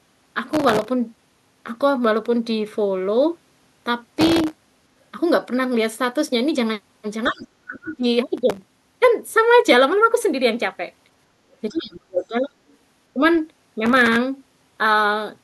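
Speech, with processor overload crackle at 0.49–0.89, 4.19–5.11, 8.38–8.68 and 13.86–14.16 s. That's gritty tearing from many missed buffers in a row, with stale audio repeated in tiny chunks that point to buffers of roughly a millisecond and a half. Faint scraps of the other side's voice leaking through show up at 7.25–7.45, 7.89–7.95 and 12.69–12.76 s, well below the speech, likely loudspeaker echo the canceller didn't fully remove. The talker's voice drops out deeply at 7.27–7.47, 7.66–8.05 and 11.7–12.38 s, with a shallower dip at 13.14–13.22 s, likely speech suppressed in double talk.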